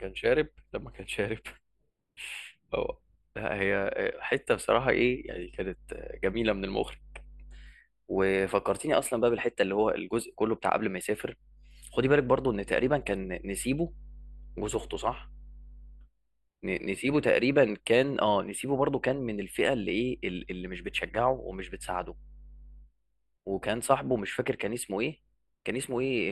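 Channel delay (comb filtering) runs throughout the speech. One channel lags by a few samples, so the mono sum cancels near 7 kHz, giving a hollow, phasey sound with fixed notches.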